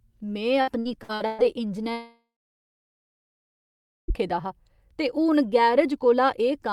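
From 0.61 to 1.41 s the speech turns choppy: repeated packet loss (robotic sound), five short holes, the longest about 122 ms, each patched by stretching the previous sound, so nearly half that stretch is filler rather than real audio.

At 1.92 s the sound smears into a fading buzz, then roughly two seconds of silence follow until 4.11 s, where speech resumes at "दा हा". This is likely a long network dropout; unlike the brief scattered gaps before it, one continuous stretch is simply lost.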